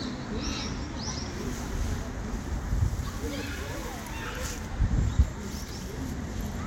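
At 2.32 s, compressed frames are skipped. The decoder never plays a short run of frames, so the sound jumps ahead by roughly 150 ms, which fits around seven frames.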